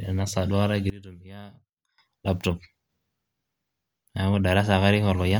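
From 0.9 to 1.98 s the speech drops about 21 dB to a faint ghost, likely one channel inverted, cancelling the centre when summed.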